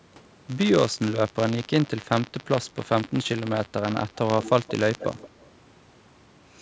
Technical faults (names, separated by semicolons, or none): buffer tearing; echo leak